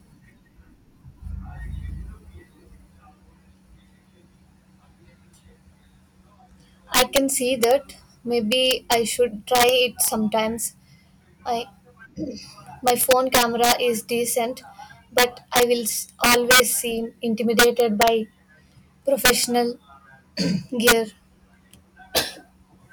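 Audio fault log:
Throughout, integer overflow: speech driven about 6 dB past full scale wraps to the opposite sign on its loudest peaks, a fraction of a percent of samples, giving harsh cracks.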